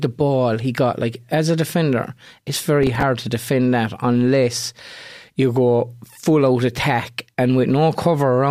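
Processor overload crackle, 2.64–3.03 s, after "as a defender it's": missed deadlines on roughly 5 ms buffers replay stale audio, tearing grittily until "to defend that unless".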